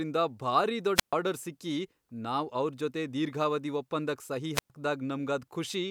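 Wireless microphone squelch dropouts hit this speech at 0.95–1.13 s and 4.54–4.70 s: the radio signal fades, hiss rises, the receiver mutes for about 130 ms and 111 ms.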